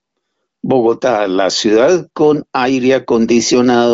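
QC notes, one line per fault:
Nothing stood out on listening to this speech, which comes through the AMR wideband (HD Voice) link at a high rate of about 23 kbit/s with nothing above roughly 7.8 kHz.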